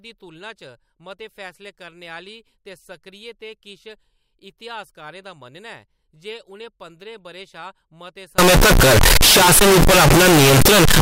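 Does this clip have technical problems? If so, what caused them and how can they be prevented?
Yes. Signed and unsigned samples mixed up from 8.38 s to the end at 11.02 s: the 16-bit speech turns into loud, harsh distortion, quiet moments as loud as the rest, likely because flipping the top bit makes every zero crossing jump full scale. Prevent it by declaring the sample format explicitly at every conversion and decoding step.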